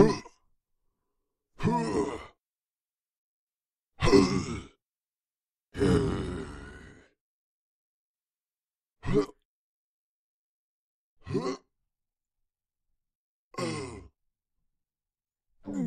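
A recording of sounds. From 5.98 to 8.14 s, and again from 8.95 s to the end, the level falls abruptly by about 6 dB. The likely cause is one channel dropping out, so the mono sum loses half its shared content.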